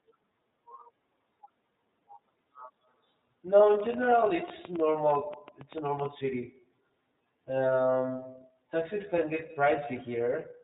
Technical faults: iLBC codec; train of clicks

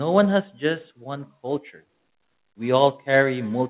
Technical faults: automatic gain rising

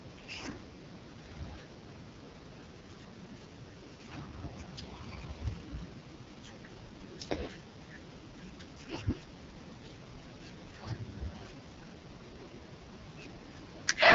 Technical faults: AMR wideband (HD Voice) codec

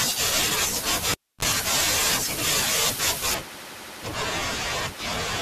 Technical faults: cable pulled and plugged in; de-emphasis applied wrongly

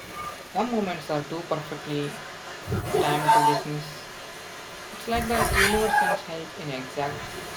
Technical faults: echo leak; speech suppressed in double talk

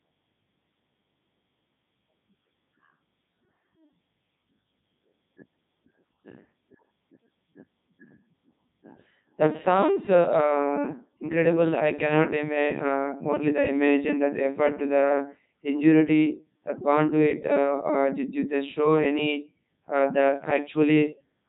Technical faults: Codec 2 vocoder

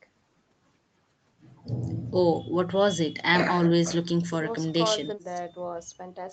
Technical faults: none

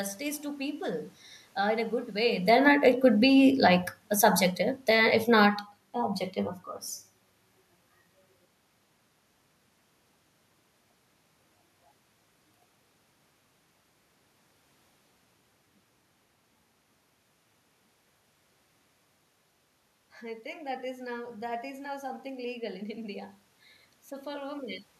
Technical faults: automatic gain falling

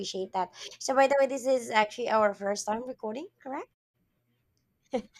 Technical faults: digital broadcast dropout

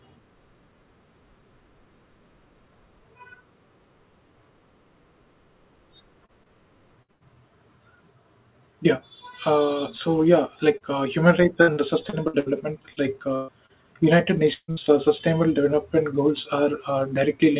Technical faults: repeated packet loss (robotic sound); short concealed packet loss; burst of packet loss

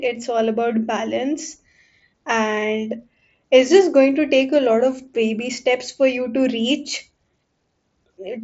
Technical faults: none

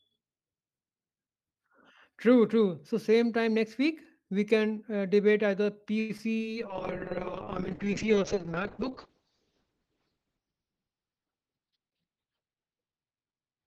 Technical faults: call audio freeze; short concealed packet loss; call bitrate drop; jitter buffer speed-up

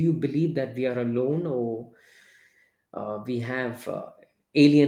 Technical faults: none

